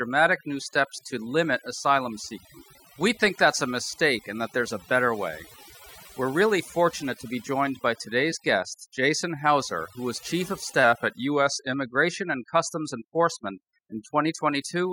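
Throughout the speech, the background breaks up into twinkling, warbling specks, and quieter parts of the speech drop out along with it. This is overdone noise removal: a reduction set too strong pulls individual frequency bands far down or off whenever they sit near its noise estimate.

From 10.84 to 11.73 s, the audio slows by about 5.4% and drops in pitch by roughly 97 cents, close to a semitone, before returning to normal. This is likely a drift correction step, where clock-matching software changed the playback rate in one abrupt jump to manage its buffer.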